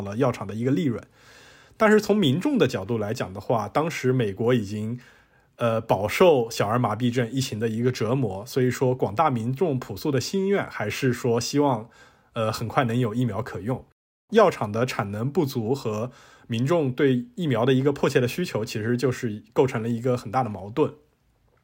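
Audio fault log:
No faults are heard anywhere in this speech clip. There is nothing to log at any point in it.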